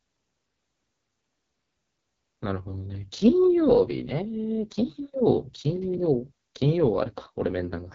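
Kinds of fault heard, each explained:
AMR wideband (HD Voice) codec: The speech has been squeezed through the AMR-WB mobile codec at a very low rate, which fits 6.6 kbit/s. At that rate the vocal tract model struggles. The voice comes out heavily rough and raspy, and nothing is heard above about 7.5 kHz.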